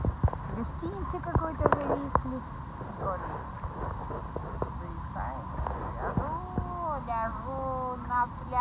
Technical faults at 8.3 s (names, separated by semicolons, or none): none